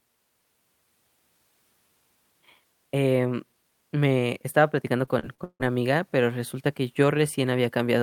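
Speech with repeated packet loss (robotic sound) from 5.05 to 5.62 s, just before "amiga pero resulta que": four gaps, the longest 158 ms, patched by stretching the last sound over about 43% of the span, so it turns choppy. Spectrograms show smeared, repeated frames; waveforms show broken, looping chunks.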